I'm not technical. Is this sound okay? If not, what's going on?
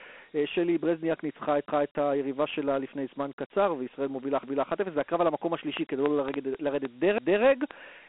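No. The whole clip has been stored as Dialogic VOX ADPCM, a voicemail-style format. It sounds thin like a phone line, with gritty hiss and nothing above about 3.8 kHz.

There are overlapping chunks at 1.68, 4.43 and 7.18 seconds. The sound arrived in pieces about 2.5 seconds long, and each join replays a quarter second, so it stutters.

From 5.77 seconds to the end there is a train of clicks. Irregular pops, about 2.6 per second, stand out loudly over the speech. This is likely interference from nearby equipment.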